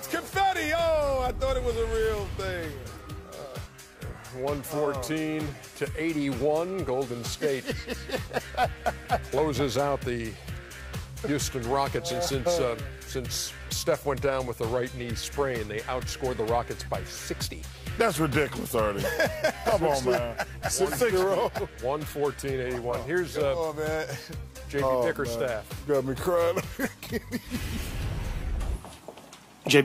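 No technical faults are audible.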